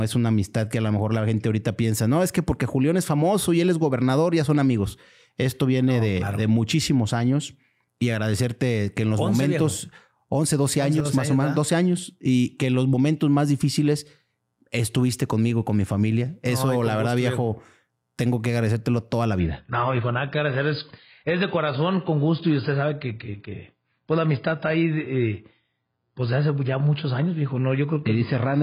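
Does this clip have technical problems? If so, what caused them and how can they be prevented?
Yes. From 11.00 to 11.05 s the level falls abruptly by about 6 dB. One channel drops out, likely. The mono sum then carries only one side, so shared sound halves in level. Prevent it with secure stereo cabling and connectors.

At 19.39 s the treble suddenly disappears, with nothing above 5.1 kHz, and codec artefacts rise until the end. This is adaptive stream at a lower bitrate. It fits a switch from 96 to 16 kbit/s AAC after the connection slowed. Prevent it with a steadier connection or a higher minimum bitrate.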